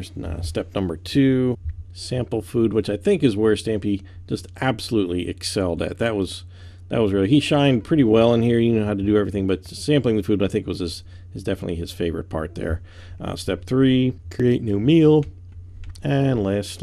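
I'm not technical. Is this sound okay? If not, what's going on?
Yes, it's fine; nothing here sounds wrong.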